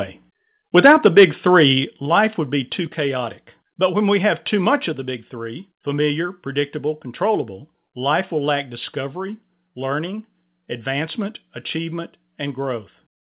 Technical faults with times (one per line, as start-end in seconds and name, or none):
0.77-1.25 microphone overload
0.87 microphone volume stepped down
1.86 microphone volume stepped down
2.88 microphone volume stepped down
4.92 microphone volume stepped down